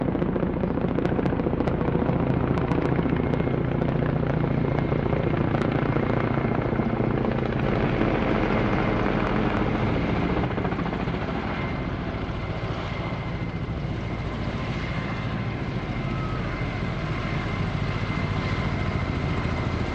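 A doubled audio track runs from 7.63 s to 10.45 s: a second, full-band copy of the sound trails the original by roughly a third of a second, at about the same loudness. It carries no decay or added room character, and it cuts in and out abruptly at those two points. The likely cause is the same signal reaching the mix twice, once through a slower path or through two out-of-step copies left in an edit.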